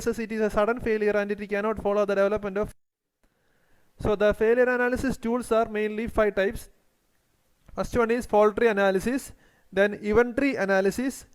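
Sample clock jitter runs throughout: the converter's timing wobbles by around one and a half microseconds, mis-sampling steep waveform slopes. The resulting hiss, about 40 dB below the signal, swells on loud, bright passages and vanishes in silence. A spectrogram shows faint broadband haze tracking the high-frequency energy.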